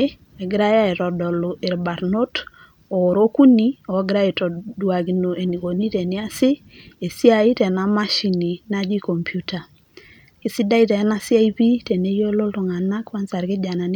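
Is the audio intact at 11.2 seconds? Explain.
Yes, at 11.2 seconds the speech plays through intact, with no dropout, click, distortion or other fault to be heard at that moment.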